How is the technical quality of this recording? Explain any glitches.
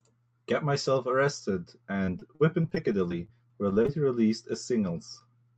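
The recording has one glitch, a stretch of repeated packet loss that gives a choppy, robotic sound. It travelled over a call path whose spectrum tops out near 8 kHz, which fits the Opus codec.

From 2.05 to 3.90 s, packet loss (robotic sound) occurs fourteen times, with the longest gap about 40 ms. Each hole is filled by stretching the preceding sound, concealing about 13% of that span. The speech turns choppy, with pieces missing. On a waveform this shows as repeated, looped-looking fragments, and on a spectrogram as smeared, frozen harmonics broken by brief discontinuities.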